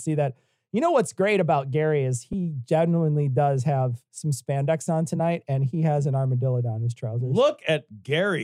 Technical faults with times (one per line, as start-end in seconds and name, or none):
2.32 corrupt frame decoded